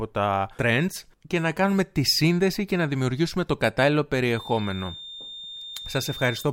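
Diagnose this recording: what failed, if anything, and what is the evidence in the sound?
A feedback whistle starts at 4.23 s and holds to the end: a thin, steady 3.6 kHz tone sitting well below the speech, swelling and fading slowly in level. The stage is the analogue side, likely a loudspeaker leaking into the microphone, with the loop balanced right at the ringing point.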